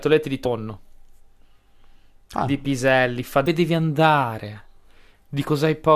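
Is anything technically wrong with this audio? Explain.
Yes. Damaged data in a compressed stream causes brief blips at 0.44, 3.46 and 5.46 s. Corrupted bytes make the decoder misread frames and lose sync, producing short chirps, squawks, clicks or holes.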